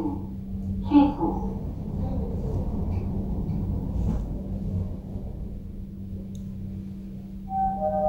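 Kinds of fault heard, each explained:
No kinds of fault are heard in this recording of sounds.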